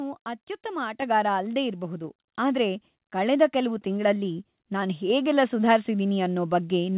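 The microphone volume stepped up four times, with voice and background jumping together: at 1.02 s by about 6 dB just before "ಅಲ್ದೇ ಇರ್ಬಹುದು ಆದ್ರೆ ಕಳೆದ", at 2.04 s by about 2 dB right after "ಅಲ್ದೇ ಇರ್ಬಹುದು", at 3.06 s by about 1 dB ahead of "ಕಳೆದ ಕೆಲ್ವು", and at 5.1 s by about 3 dB. That's the call software nudging the input gain up in steps, through a narrowband call path with nothing above 4 kHz.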